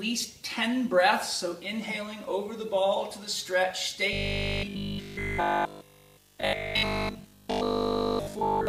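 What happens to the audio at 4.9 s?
Robotic sound from repeated short buffers runs from 4.13 to 8.67 s, likely because audio arrives too seldom. Essentially every stretch is a repeated 20 ms slice, imposing a rigid 50 Hz metallic buzz.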